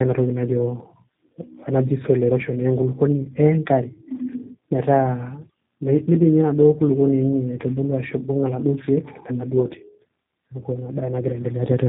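Throughout, tandem speech coding: two speech codecs in a row re-encode each other's errors, so the roughness and warble exceed any single codec's. Nothing is heard above 3.8 kHz.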